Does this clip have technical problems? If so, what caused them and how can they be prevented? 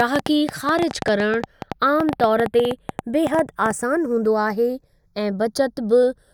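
Yes. The channels drift apart throughout. The two sides run on separate clocks with an error of around 30 ppm, so their offset slides to a fraction of a millisecond by the end, and in mono the comb notches sweep slowly, giving slow flanging. Clock both channels from one shared source.

A train of clicks runs from 0.00 to 3.72 s, ending just before "आसान हूंदो". There are around thirty at about 8.6 per second, irregularly spaced, peaking roughly 15 dB above the speech and audible in pauses. Likely interference or a faulty connection or power supply is the cause. Isolate cabling from nearby equipment and check the interface connection.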